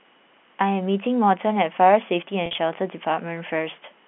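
From 2.46 to 2.58 s, packet loss with pitch repetition scatters about 80 ms of gaps, the longest 50 ms, bridged by repeated pitch periods, giving a brief buzzy hold rather than silent dropouts.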